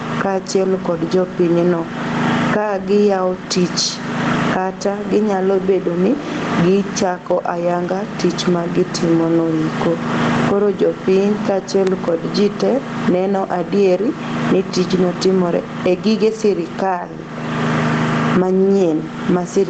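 Gain pumping runs through the whole speech clip. The gain swings roughly 20 dB. Loud and soft parts sit close together. The likely cause is input gain set far too high, pulled down by a fast limiter.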